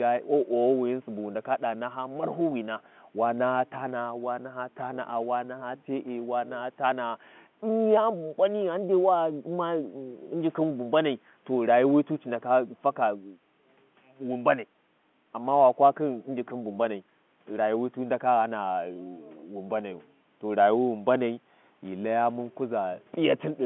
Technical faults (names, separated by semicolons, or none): none